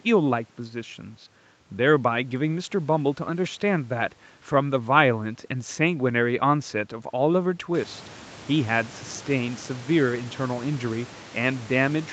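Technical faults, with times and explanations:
No technical faults can be heard; the room noise rising by about 15 dB near 7.5 s belongs to the recording, and the top end stopping at 8 kHz is the normal bandwidth of the call path.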